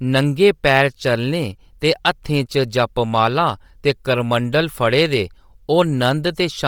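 From start to finish the speech carries a breathy, grainy edge on its upper frequencies, the signature of heavy Bluetooth LC3 compression, likely from an LE Audio link squeezed to a low rate that fits around 32 kbps with 10 ms frames. Rather than cutting the top band cleanly, the coder has zeroed much of it and filled it with noise, so the top end sounds grainy, not dull. Nothing sits above 20.2 kHz.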